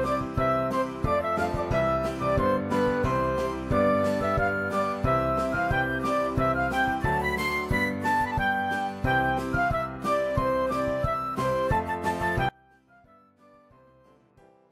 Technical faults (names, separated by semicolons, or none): audio dropout to a faint residue